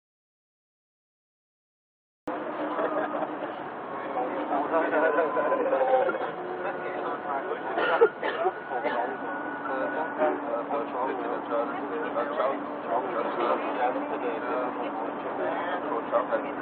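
From the very start until about 2.28 s, there is an audio dropout to silence. The clip opens in complete silence, with no room tone or background hiss at all. The sounds then begin abruptly, already under way rather than fading in. The likely cause is a lost input, such as a disconnected device, a failed link or a mute left on, while the recorder kept writing silence. Whatever sounded during those first two seconds is gone.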